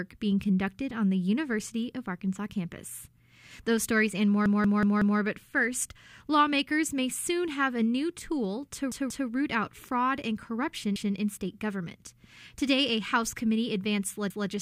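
Repeated buffer stutters occur at 4.46–5.20 s (four extra plays), 8.92–9.29 s (two), 10.96–11.15 s and 14.30–14.49 s. Late data made the device replay a 0.19 s chunk, which fits an 8192-sample buffer. Waveform and spectrogram show identical blocks butted together at hard vertical seams.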